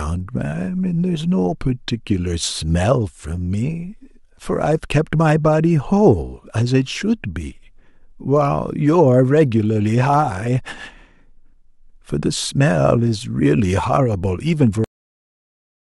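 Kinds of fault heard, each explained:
Cut-off end: The final buffers were never written or played. The speech stops abruptly mid-sound at 14.84 s, then digital silence follows with no decay.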